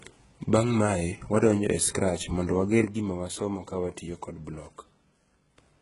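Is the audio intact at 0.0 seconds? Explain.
No, the speech carries heavy HE-AAC compression across the whole clip, including 0.0 s. The upper band is likely rebuilt by copying lower bands upward, sounding gritty and lispy on s sounds; a spectrogram shows blocky, repeated treble and nothing above 11.1 kHz, which fits roughly 12 kbps.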